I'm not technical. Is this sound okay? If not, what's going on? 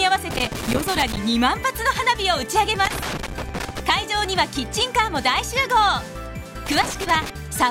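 No. Three bursts of irregular crackling and scratching come from 0.30 to 1.17 s, 2.85 to 3.80 s and 6.66 to 7.30 s. This is loose connector crackle: a worn or dirty plug contact keeps breaking and reconnecting as it shifts, chopping the sound into rough bits.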